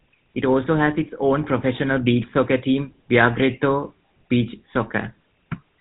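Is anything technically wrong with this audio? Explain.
Yes. The whole clip has passed through the GSM full-rate codec, the original 13 kbps mobile speech coder, and its damage is plainly audible throughout. The coder models the speech as a vocal-tract filter driven by a sparse, regularly spaced pulse train, keeping only a fraction of the excitation detail, and it discards everything above 4 kHz. As a result the speech sounds narrowband and muffled, with a buzzy, gravelly roughness over every voiced stretch.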